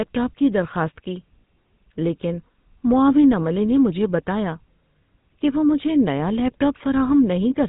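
GSM full-rate codec damage runs throughout this speech clip, with nothing above 3.8 kHz and a plainly audible buzzy, gravelly roughness. The vocal tract is rebuilt from a filter driven by sparse regular pulses, and the coarseness fits a 13 kbps bitrate.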